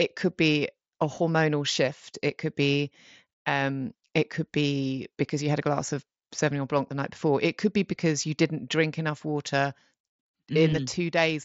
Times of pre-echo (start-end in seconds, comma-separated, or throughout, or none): none